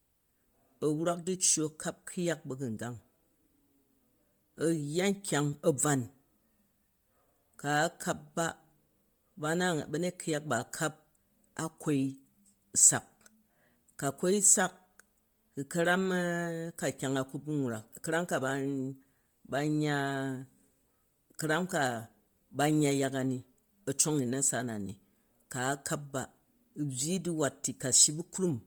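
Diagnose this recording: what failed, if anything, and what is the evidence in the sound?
The fault is at the codec stage and runs through the whole speech clip. The voice carries a heavy, grainy, noisy edge. That fits Bluetooth LC3 compression, likely at about 32 kbps with 10 ms frames, where zeroed upper bands are refilled with noise.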